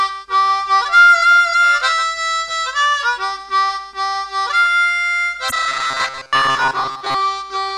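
At 5.47 to 5.53 s the audio breaks into a short glitch from damaged data in the compressed stream: the decoder misreads corrupted frames, loses sync and lurches ahead to the next header. That single abrupt blip sets it apart from a steady dropout or repeated glitching. From 5.68 to 7.15 s the sound turns into a rigid metallic buzz at 133 Hz, robotic sound from repeated short buffers. It is likely caused by audio arriving too slowly, so segments of about 7.5 ms are looped for most of that stretch. Unlike the corruption blip, it lasts well over a second and holds a constant pitch.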